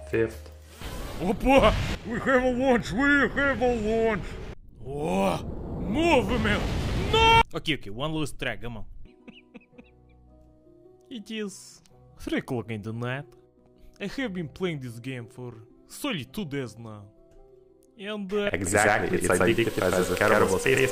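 At 18.67 s a doubled audio track kicks in abruptly and runs to the end: a second, equally loud copy trails roughly a tenth of a second behind, with no decay or room colour. It's likely a second, slower capture path mixing in.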